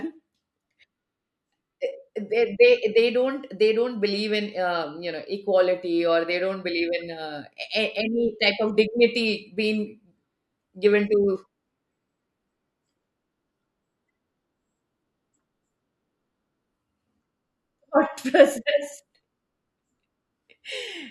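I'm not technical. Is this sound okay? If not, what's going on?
Yes, this speech recording has no technical faults that need attention.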